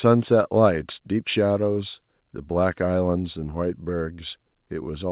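No technical faults can be heard in the speech, which comes through a call path whose band ends at 4 kHz, consistent with a G.711 A-law codec.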